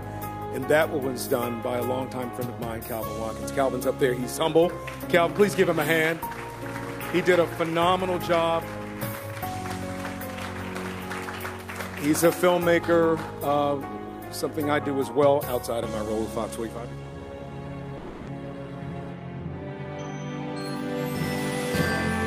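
At 17.97 s the sound turns into a fading buzzy continuation of what came just before, lasting about 0.3 s, with no full silence, and then resumes at 18.29 s with that stretch missing. This is likely a long network dropout, with the receiver concealing the lost audio.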